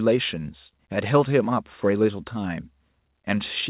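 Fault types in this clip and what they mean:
Nothing stood out on listening to this speech, which comes through a call path that carries nothing above 4 kHz, as a G.711 line normally does.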